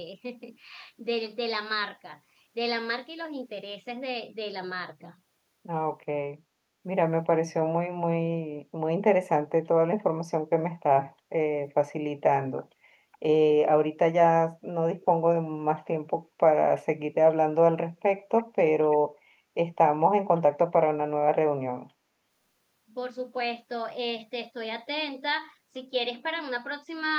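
This speech clip has three brief bursts of echo leak: a very faint one at 15.01 to 15.05 s, then two stronger but still quiet scraps at 18.38 to 18.44 s and 18.9 to 18.97 s. Each is a delayed ghost of the voice, trailing by about 351 ms in the first case and 331 ms in the other two. It's likely a far-end loudspeaker setup whose echo canceller let some pickup slip back down the line.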